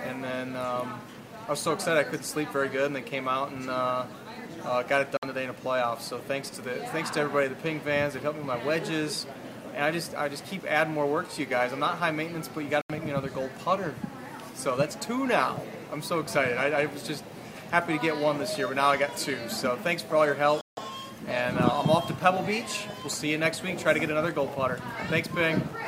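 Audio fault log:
5.17–5.23 s, 12.81–12.90 s and 20.61–20.77 s: Bluetooth stall. The sound drops abruptly to silence three times, for 56 ms, 82 ms and 159 ms, then carries on. This is likely a wireless link held up by interference, so the headphones' buffer ran dry until resent packets arrived. The waveform shows flat gaps with hard edges, and the spectrogram shows full-height blank vertical bands. The longest gap is the third.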